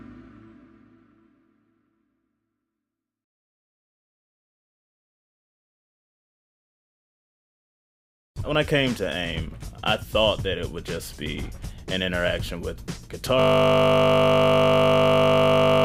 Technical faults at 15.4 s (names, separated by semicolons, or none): system hang loop